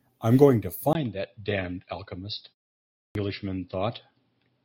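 Speech, with two faults. At 0.93 s the sound goes dull and boxy after a gap of about 20 ms. From there to the end, nothing reaches above 5.4 kHz, the level falls by about 5 dB, and a new noise floor appears well below the speech. The likely cause is an input switched to a poorer device, such as another microphone or a headset's call profile. At 2.99 s there is a clipped start after a pause. A silence of 0.53 s ends, and the next 162 ms are missing until 3.15 s, so the speech begins abruptly without its first sounds. The output device fell asleep in the silence and needed that long to wake again.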